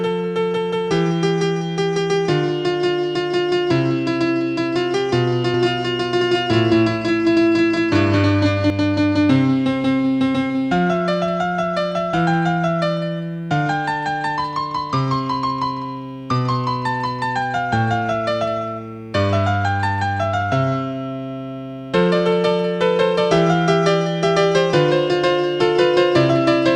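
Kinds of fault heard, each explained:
doubled audio track: A second copy of the same audio was likely captured through a slower path and mixed back in, so from 5.54 to 8.70 s a dry, full-band duplicate trails roughly 200 ms behind at about equal loudness, starting and stopping abruptly.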